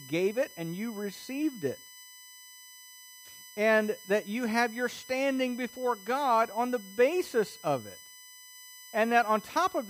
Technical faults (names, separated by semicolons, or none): USB whine